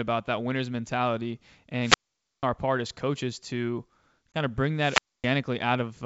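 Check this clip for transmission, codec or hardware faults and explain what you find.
Three faults of two kinds turn up in the speech: two wireless microphone squelch dropouts and one ADPCM packet-loss hole. The wideband telephone coding underneath sounds like G.722 with little or no coding noise, which fits its full 64 kbit/s mode.

From 1.80 to 2.43 s, and again from 4.78 to 5.31 s, hiss swells briefly, then the sound drops into near silence, about 0.49 s in the first case and 0.26 s in the second, before the speech comes back. This is a wireless microphone squelch dropout. The analogue FM link faded, the receiver's noise rose as the signal weakened, and its squelch closed the output until the carrier recovered.

At 4.32 to 4.37 s there is a sharp-edged gap of about 20 ms, as if a single packet went missing. The speech resumes with a little roughness that clears within a few tens of milliseconds. 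This is packet loss on an ADPCM call. The missing audio was filled with silence, so the decoder's predictor and step size no longer matched the sender's, and it needed a moment to track back into step.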